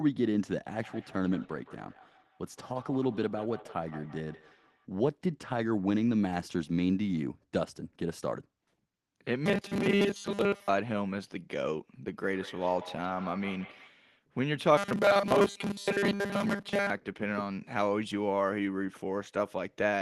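From 0.75 to 4.87 s, a feedback echo between two devices: a second device in the same room replays the call, the first microphone picks it up again, and the echo canceller on that device can't remove sound it didn't play itself. Each word returns about every 150 ms, peaking at about 19 dB below the speech, thinner and more ringing with each pass.

From 9.46 to 10.69 s, robotic sound from repeated short buffers. New audio is likely arriving too seldom, so the receiver keeps replaying its last few milliseconds and skips most of the real signal. The repeats impose a fixed 200 Hz buzz, which fits a loop of about 5 ms, and the speech becomes a stiff metallic drone that only loosely tracks the syllables.

From 12.11 to 13.97 s the feedback echo returns with the same spacing of about 150 ms, now peaking at about 17 dB below the speech. The robotic buzz returns from 14.77 to 16.90 s, again locked at 200 Hz.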